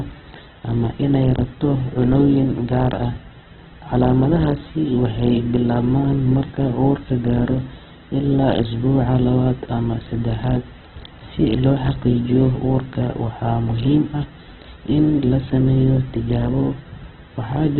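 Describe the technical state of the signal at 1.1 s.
At 1.1 s the speech sits inside a fault that runs through the whole clip: it sounds narrow, rough and grainy, with nothing above 4.1 kHz. The likely cause is heavy Opus compression in its CELT music mode at a rate that fits roughly 8 kbps, filling starved bands with folded or noise-like energy instead of leaving gaps. A spectrogram would show a flat ceiling at 4.1 kHz and smeared, speckled harmonics beneath it.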